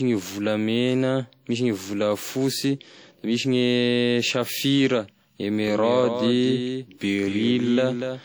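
Throughout the speech there is the smeared, swirly texture of a low-bitrate encode, and the file appears to be low-bitrate audio saved at a high bitrate, likely a lossy source at roughly 48 kbit/s re-encoded as MP3 at roughly 192 kbit/s. On a spectrogram the energy reaches about 20.2 kHz, yet the detail looks blotchy.

From 5.67 s to the end, a doubled audio track appears: a full-band copy about 5 dB quieter trails by roughly 0.2 s, most likely from a second, slower capture path. It enters abruptly with no decay, and the waveform shows each envelope repeated at that offset.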